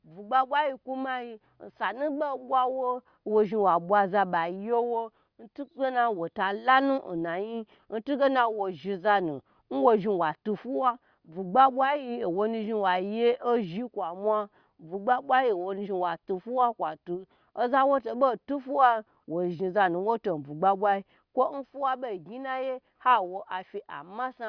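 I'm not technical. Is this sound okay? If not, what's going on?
Yes, this recording is fine. Nothing goes wrong with the sound at any point.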